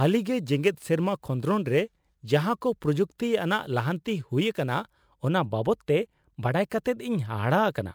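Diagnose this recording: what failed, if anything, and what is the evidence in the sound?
The fault sits in sample-format conversion: a crude rate conversion from 0.0 to 5.28 s. Through that stretch the speech carries a gritty, inharmonic fizz that rises with louder and brighter sounds, sitting roughly 30 dB under the signal, and it stops at 5.28 s. Samples were dropped by nearest-neighbour picking rather than filtered, which fits a 48 kHz to 44.1 kHz change. Unlike clipping, the added tones aren't harmonics of the sound, and they track level rather than flattening peaks.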